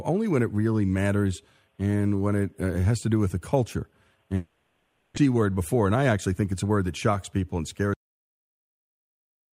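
From 4.35 to 5.18 s the audio turns into a smeared, buzzy continuation of the last sound that fades for about 0.81 s. When the audio resumes, about 0.6 s is simply gone. The likely cause is a long network dropout, with the receiver filling the gap. On a spectrogram the harmonics freeze into flat repeated bands that thin out, then the detailed pattern restarts abruptly at a mismatched point.

Right after, from 5.25 to 7.13 s, a jitter buffer speed-up plays the audio at 110% speed. The pitch stays the same, but it sounds hurried. Around a fifth of a second of backlog is trimmed by repeatedly cutting out one or a few pitch periods. The waveform shows whole cycles removed and the rest spliced end to end, and spectrogram features sit compressed in time.

The clip then has a cut-off end at 7.94 s. The audio stops mid-sound because the final buffers were never played. It drops straight to digital silence with no decay. 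The waveform ends in a vertical edge to a flat line, and the spectrogram goes from full energy to empty, possibly with a thin broadband click stripe at the cut.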